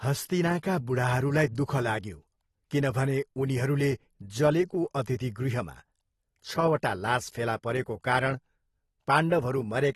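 From start to finish the speech carries plainly audible damage of the kind left by AAC compression, likely at a low bitrate around 36 kbps. Nothing remains above 12.4 kHz, so the top sounds dull, and the quantiser has left sibilants fizzy and sustained vowels warbling and smeared. A simple low-pass filter would also remove the top, but it would not add this swirling, unstable texture within the bands that remain.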